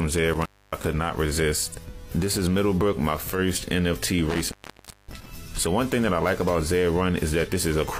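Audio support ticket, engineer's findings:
Intermittent contact at 0.33–0.85 s and 4.29–5.31 s. Signal drops out for about 270 ms, then about 560 ms, crackle at each break and faint hiss while open. Probable loose cable or plug; connection momentarily opening and reseating.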